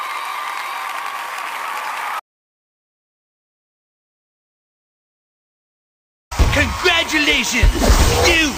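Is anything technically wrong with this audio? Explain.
Yes. From 2.20 s to 6.31 s there is an audio dropout to silence: the input was likely cut off while recording continued writing silence. The sound stops abruptly, leaving 4.1 seconds of total silence without room tone, and that material is lost.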